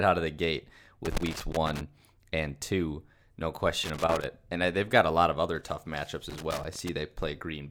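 Loose connector crackle breaks out at 1.05 to 1.81 s, 3.84 to 4.24 s and 6.30 to 6.89 s: a worn contact chopping the speech into scratchy, irregular bursts.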